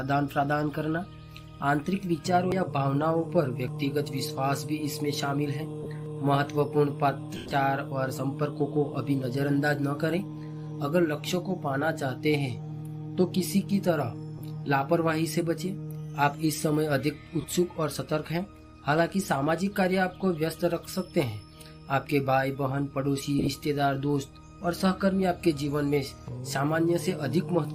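Jumps in the sound at 2.52 s and 3.68 s are likely dropped buffers (overrun): audio was overwritten before being read, so the two sides butt together. About 70 ms goes missing at 2.52 s and about 20 ms at 3.68 s. On a waveform each shows as a sharp discontinuity with no gap, and on a spectrogram as a thin vertical line.

From 5.83 to 5.86 s, 30 ms of lost LE Audio frames, consistent with 10 ms LC3 frames, turn tonal content into a brief noisy smear, because the decoder repeats the last spectrum with scrambled signs. The spectrogram shows harmonics dissolving into diffuse broadband energy.

A third jump at 6.06 s likely follows the same overrun pattern, this time skipping about 20 ms.

The longest LE Audio loss runs from 7.35 to 7.51 s: 130 ms lost over a 160 ms stretch, with one run of roughly 100 ms. That run fades toward silence, seen as an energy envelope decaying into a faint, blurred band.

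Shorter 30 ms smears recur at 14.38 to 14.41 s and 17.41 to 17.44 s. At 23.39 to 23.47 s, 50 ms of scattered losses over 80 ms, the longest run only about 20 ms, leave small grainy patches across the harmonics.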